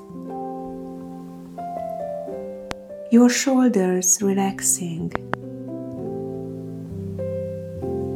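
Loud pops occur from 2.71 to 2.73 s as a single sharp crack, then from 5.15 to 5.36 s as two pops in quick succession, each rising around 20 dB above the surrounding sound, which carries on underneath. The likely cause is a sudden voltage step or spike, such as from a plug, a switch, static discharge or a driver glitch, being added to the signal, with the downstream circuitry shaping it into a brief thump.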